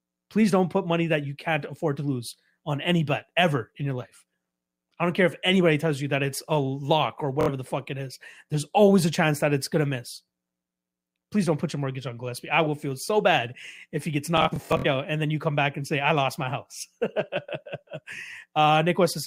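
At 7.41 s, after "it's a lock or", and from 14.38 to 14.86 s, after "bad if he gets", Bluetooth stutter: late packets make the receiver loop its last slice into a buzz rather than silence, then the sound jumps ahead.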